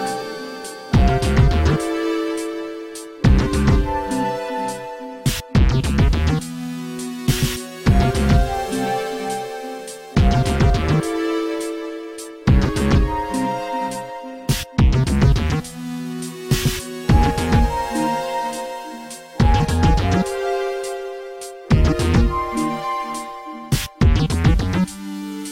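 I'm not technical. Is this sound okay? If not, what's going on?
Yes, nothing stood out as a problem when listening to this sound.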